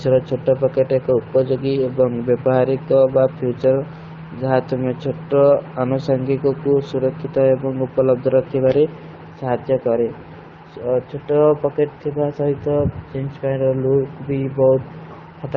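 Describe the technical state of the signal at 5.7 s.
At 5.7 s the speech is intact, carried through the AMR wideband (HD Voice) codec at a quality that fits its 12.65 kbit/s mode, with no fault at that moment.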